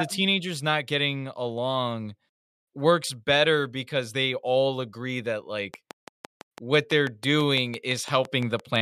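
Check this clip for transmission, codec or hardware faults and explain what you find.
There is one fault, a train of clicks. From 5.74 s to 8.77 s, something, likely electrical interference or a struggling interface, injects a steady pulse about 6 times per second. Roughly twenty identical clicks sit around 10 dB above the speech, ticking evenly through words and pauses alike until the end.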